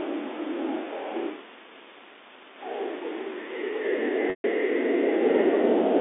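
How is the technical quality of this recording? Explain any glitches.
There is one glitch, a dropout near the end, heard through a telephone-band line.

From 4.30 to 4.44 s, 140 ms of audio goes missing. This is packet loss with pitch repetition. The receiver fills the gap by repeating the last pitch period and fading it out over about 50 ms. The gap outlasts that fade, so a brief held, buzzy tone dies into silence before the speech returns with a short cross-fade. The length fits fourteen 10 ms packets.

The G.711 A-law telephone coding limits the sound to roughly 250 Hz to 3.6 kHz.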